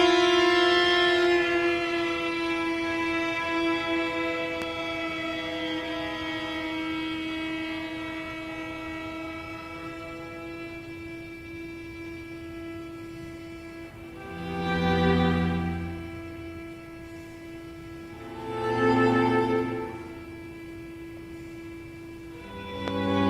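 Two loud pops jump out, at 4.62 to 4.64 s and again at 22.88 to 22.90 s, each a single sharp hit peaking about 15 dB above the audio, which runs on underneath. They're likely voltage spikes from a plug, switch, static or driver glitch.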